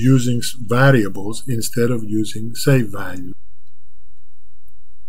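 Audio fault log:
Throughout: DC offset. The whole waveform sits shifted off the zero line by a constant of about -19 dBFS. That shift is inaudible as a tone. It takes up headroom on one side of the waveform and shows up as steady energy at 0 Hz, the very bottom of the spectrum.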